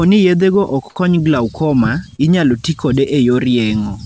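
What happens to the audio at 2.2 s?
A short concealed packet loss from 2.16 to 2.20 s: 20 ms arrived too late, so the receiver extended the preceding sound, leaving a brief smear.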